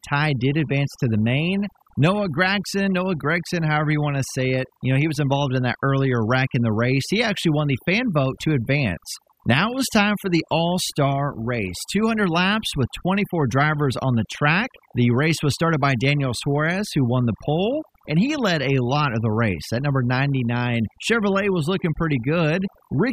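Overdone noise removal runs through the whole speech clip. A noise reducer set too strong shuts off frequency bands that sit near its noise estimate, taking quieter parts of the voice with them. The background drops and breaks up into twinkling specks.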